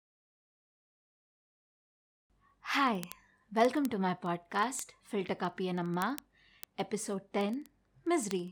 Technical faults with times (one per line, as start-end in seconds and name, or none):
0.13-8.51 word clock ticks